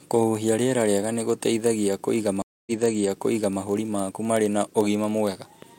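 Throughout, a block size mismatch (padded) leaves short zero gaps in each block, producing a steady 43.1 Hz buzz, which fits 1024-sample reads; waveform dropouts repeat every 23 ms. At 2.42 s a stream reconnect leaves about 245 ms of flat silence, then a restarted decoder fades in, resuming 0.93 s earlier and repeating material until 3.60 s.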